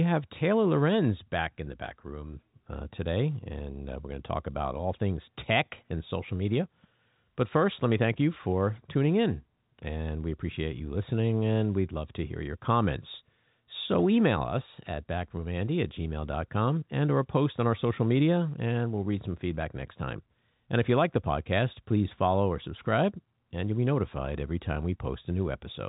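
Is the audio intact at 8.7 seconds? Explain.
Yes, at 8.7 seconds the speech is intact, with no dropout, click or distortion, only the narrow band of ordinary G.711 telephone coding with nothing above about 3.8 kHz.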